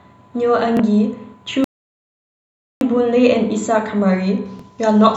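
The clip is speech, and from the start to 4.46 s it has a hollow, phasey quality from channel delay (comb filtering): one channel arrives a few samples late, roughly 0.1 ms, and when the two are folded to mono the shared content cancels at evenly spaced frequencies, with the first notch near 5 kHz and more repeating above it. Unlike a simple treble roll-off, the dullness comes from fixed, regularly spaced notches, so the top end sounds thinned rather than smoothly muffled. At 0.77 to 0.80 s and again at 4.59 to 4.62 s there is a brief Bluetooth stutter, a slice of about 23.2 ms that repeats once as a tiny hiccup, which points to a single lost audio packet each time while the receiver replayed its last buffer. Because the sound keeps going as repeated material and then carries on slightly further along, it differs from a dropout into silence. From 1.64 s to 2.81 s the sound stops outright for about 1.17 s in a playback stall, most likely because the player ran out of data or its thread was held up. 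It differs from the stutter because nothing repeats and nothing buzzes. The output simply goes silent mid-flow and then resumes.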